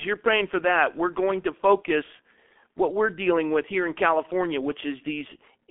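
From start to finish the speech carries heavy G.723.1 codec damage: nothing above about 3.7 kHz, a narrow 200 Hz to 3.5 kHz line band, and that muffled, hoarse, smeared-consonant quality you get when a coarse 30 ms frame model, likely the 6.3 kbit/s mode, squeezes the voice.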